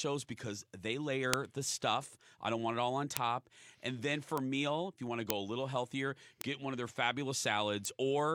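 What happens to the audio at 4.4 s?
A bit error spike at 4.38 s: one flipped bit throws a single sample off by a power of two, giving one sharp, broadband tick peaking at about -16 dBFS.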